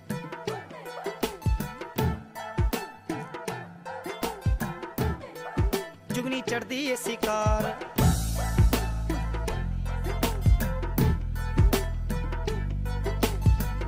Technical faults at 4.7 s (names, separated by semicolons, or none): none